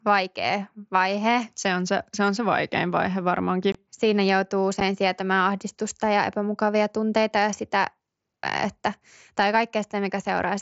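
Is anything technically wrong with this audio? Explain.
Yes. The speech has two abrupt holes: one from 3.72 to 3.75 s, just after "on se vaikein vaihe", and one at 4.80 s, just before "sietämään ahdistusta ja epämukavia". These gaps, about 22.5 ms and 7.5 ms long, are unconcealed Bluetooth headset packet loss. Voice packets dropped between headset and phone on the wideband mSBC link, and silence or an idle pattern replaced them with nothing smoothing the edges. Each gap therefore sounds like a short dropout.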